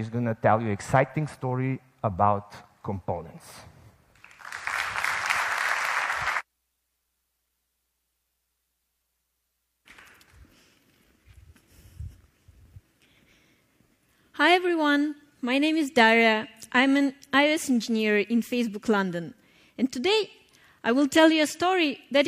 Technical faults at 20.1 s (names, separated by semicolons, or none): none